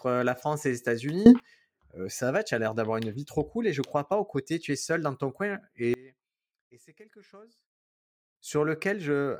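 Level and background noise leap together by about 19 dB at 1.26–1.4 s, then drop by about 24 dB at 5.94–8.36 s: a sudden gain jump, likely from gain applied without a ramp.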